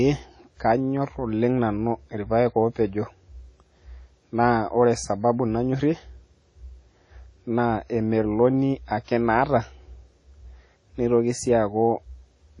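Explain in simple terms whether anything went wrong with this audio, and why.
The audio was squeezed too hard, most likely by WMA compression, which shrinks files by discarding detail it judges less important. Here it threw away too much, and the damage is plainly audible from start to finish. The speech sounds ringing and washy, with a hiss that swells and fades along with the talking. The brightest part of the sound is gone entirely, with nothing above 10.1 kHz, so everything sounds dull.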